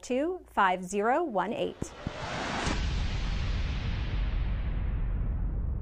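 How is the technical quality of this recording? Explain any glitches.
Two loud pops break into the recording, from 1.82 to 2.09 s and from 2.63 to 2.73 s. Each is a sharp double pop, around 10 dB above the sound, which keeps running underneath. They likely come from a sudden voltage step, such as a switch, static or a driver glitch, that the following circuitry turned into a brief pulse.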